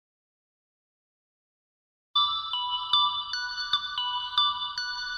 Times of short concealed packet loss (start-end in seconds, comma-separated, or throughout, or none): none